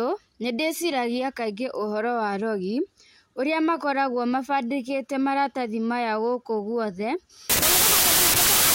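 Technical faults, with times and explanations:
7.50 to 8.74 s, wrong sample width: right after "maya gũkũ guothe", 16-bit samples are being read as packed 24-bit ones, so every decoded value mixes bytes from neighbouring samples. Only occasional values keep the true high byte, leaving the speech faint under loud broadband hiss and running 1.5 times too fast and high. A spectrogram shows a sudden wash of energy across all frequencies with faint, upward-shifted harmonics inside it. The waveform jumps to loud jagged noise.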